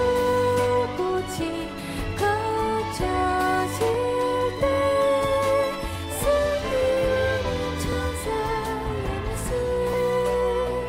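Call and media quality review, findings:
Micro-skips at 1.97, 3.94, 7.92, 9.94 s, about 20–27 ms each. Overlap between stream segments: player trims overlapping timestamps at 2 s boundaries, dropping real audio.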